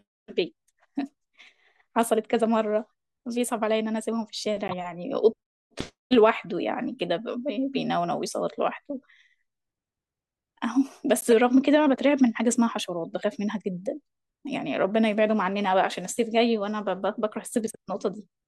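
Speech, with two corrupt frame decoded faults. Brief glitches sound at 4.68–4.73 s and 11.21–11.28 s. Damaged compressed frames were decoded anyway, spraying energy into wrong frequencies.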